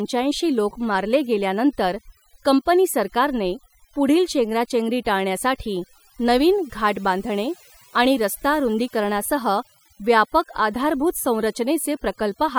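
Overdone noise removal runs throughout the speech. A noise reduction stage set far too hard cuts individual frequency bands whenever they sit near its noise estimate, taking quiet parts of the voice with them. The background drops and breaks up into twinkling specks.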